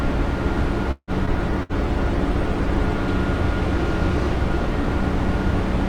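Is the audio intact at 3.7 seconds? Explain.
Yes, the audio is intact at 3.7 seconds, with no dropout, click, distortion or other fault at that moment.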